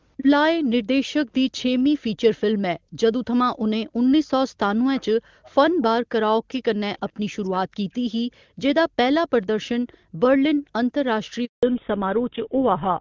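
Echo leak, 0.17 to 0.23 s: a brief copy of the near-end voice slips through, delayed by 452 ms and sitting about 10 dB below the speech. The likely cause is a loudspeaker at the other end whose echo canceller failed to subtract everything its microphone caught, so the residue travelled back down the line. The fragment is short and scrappy.

Background gated by the echo canceller, 1.18 to 1.29 s and again at 2.79 to 2.97 s: the room sound drops away by as much as about 40 dB, for roughly a tenth of a second the first time and about a fifth of a second the second time. While the far-end loudspeaker was active, the canceller clamped the microphone hard. The ambience then snaps back once it releases.

Speech suppressed in double talk, 4.87 to 8.1 s: across this stretch the talker's own voice repeatedly dips and breaks up, losing up to about 40 dB. The affected portions add up to around two seconds. 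The likely cause is both sides speaking at once, so the echo canceller could not tell near-end speech from loudspeaker echo and attenuated everything. The result sounds like the voice being pulled under in pieces.

Background gated by the echo canceller returns at 8.43 to 8.59 s, with another dip of about 40 dB lasting roughly 150 ms. A second echo leak follows at 9.42 to 9.98 s. It has the same 452 ms delay but is far quieter, about 35 dB down. The likely cause again is uncancelled loudspeaker pickup at the far end. Gating resumes straight after it, from 9.98 to 10.73 s, with the background ducking by up to about 40 dB for around 300 ms in total within that span.

Handover gap, 11.45 to 11.63 s: the audio dies away quickly and stays silent for 180 ms while the call moves between networks. No speech frames arrived during the switch, so anything said in that interval is simply lost, and sound resumes when the new link comes up.

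Fallback to narrowband, from 11.63 s to the end: after the gap the voice turns noticeably duller and rougher, with nothing left above 4 kHz. The change points to the call dropping from HD Voice, apparently the AMR-WB 23.85 kbit/s mode, to a GSM full-rate 13 kbit/s codec. Before the switch, the wideband codec carried the speech with little or no audible damage, and the band extended to about 7 kHz.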